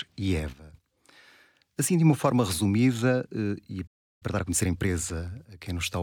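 At 3.87 s the speech cuts out in mid-flow and stays silent until 4.23 s, a gap of about 340 ms. This is a playback stall, likely caused by the player running short of buffered data or its output thread being held up. What separates it from a packet-loss dropout is that the speech simply stops for a noticeable time, rather than leaving a concealed, smeared hole.

From 4.23 s to 4.91 s the player works off the delay with a time-compressed catch-up. It removes short slices of the signal and cross-fades over the joins, so the speech runs at 1.5 times normal speed. Unlike a plain resampling speed-up, the pitch does not rise and the voice does not turn chipmunk-like. The speech sounds hurried at its normal pitch.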